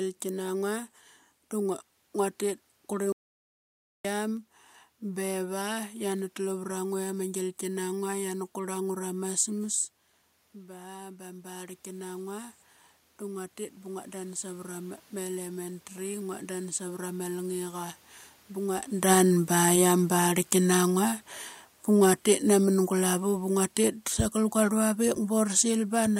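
At 3.12 s the speech cuts out mid-flow and stays silent until 4.05 s, a gap of about 0.92 s, before carrying on. This is a playback stall: the output had nothing to play for almost a second, likely because the player's buffer ran dry or its thread was held up. On a waveform it shows as a flat line dropped abruptly into active signal. A spectrogram shows a clean vertical band of empty columns, with no fade on either side.

Shortly before 10 s the talker moves away from the microphone and the level drops by about 13 dB. From 10.52 s to 18.78 s an automatic gain rising response follows. The gain control registers the weaker input and climbs by about 12 dB, pulling the speech back up. The room noise is lifted with it, so the pauses get noisier too. On a waveform the envelope swells gradually over those eight seconds. A spectrogram shows the background floor brightening in step with the speech.

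Around 19 s the talker comes back toward the microphone, and the speech arrives loud because the gain is still raised. From 18.98 s to 26.15 s an automatic gain falling response brings it down by about 7 dB over roughly seven seconds. The voice and the room noise sink together, so the background fades along with the speech. On a waveform the peaks start tall and shrink steadily. A spectrogram shows the whole picture, noise floor included, dimming gradually to the end.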